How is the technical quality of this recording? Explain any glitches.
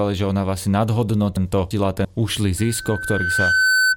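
The recording has two clear glitches: a scrambled stretch in the middle and a feedback howl that takes over the end.

From about 1.37 to 2.05 s the speech jumps and stutters, as if a piece were misplaced. That is chunks out of order. A block of about 341 ms arrived or was written one chunk late, so it plays after the audio that should follow it. Nothing is missing, but the sequence is wrong, and the pieces meet at hard joins.

From about 2.58 s to the end, a steady tone at 1.5 kHz rises over roughly a second and settles somewhat louder than the speech. This is loudspeaker feedback squeal. The microphone was picking up the loudspeaker it fed, and at 1.5 kHz the loop gain exceeded one. That single frequency kept re-amplifying itself and grew into a sustained howl until it was limited.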